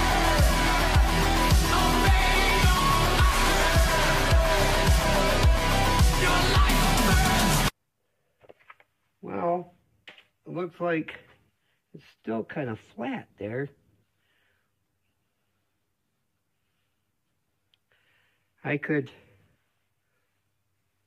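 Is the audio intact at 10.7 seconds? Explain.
Yes, the audio is intact at 10.7 seconds, with no dropout, click, distortion or other fault at that moment.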